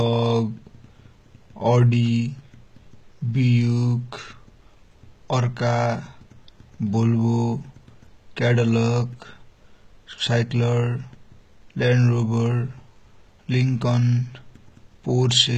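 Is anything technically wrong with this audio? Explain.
Yes. Throughout the speech there is plainly audible codec damage, likely from HE-AAC compression at a low rate consistent with about 20 kbps. Spectral band replication rebuilds the treble from copied lower bands, so s sounds turn gritty and metallic. A spectrogram shows repeated, smeared upper bands with nothing above 14.9 kHz.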